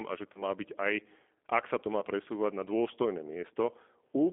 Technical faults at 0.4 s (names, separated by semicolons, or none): G.729 codec; VoIP packet loss concealed by the speech codec